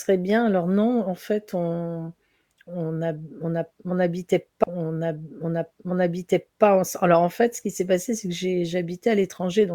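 Speech, with a stream segment repeated: from 4.63 s to 6.63 s, two seconds already heard play again after a small blip at the jump back, as the player fetched or queued that segment twice. A spectrogram shows an identical two-second block reappearing, with a sharp discontinuity at 4.63 s.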